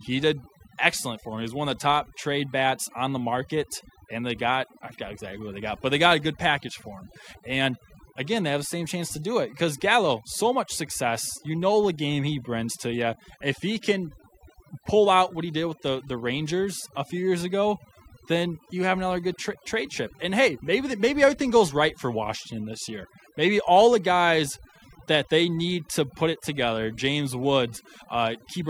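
From start to finish the speech carries overdone noise removal: the noise reduction was set so hard that narrow frequency bands get pulled down or switched off whenever their level sits near the noise estimate. Gaps fall to near silence scattered with twinkling specks, and quieter parts of the voice vanish. Unlike a noise gate, which shuts everything at once, the damage here is band by band, so the artefacts shimmer rather than chop.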